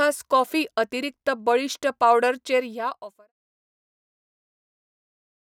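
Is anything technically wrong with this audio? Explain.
No, nothing's wrong with this speech clip; the level just eases down in a smooth fade-out that starts somewhere around two and a half seconds and is done by 3.33 s, the way an editor would finish it off.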